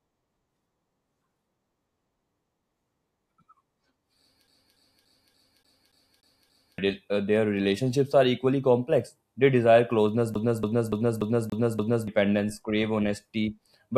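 From 4.47 to 6.78 s, then from 10.34 to 12.07 s after "desire closeness", the speech sticks like a CD stuck on one turn. A 0.29 s fragment repeats eight and then six times, with a brief mute at each jump, before resuming at "crave honesty but struggle".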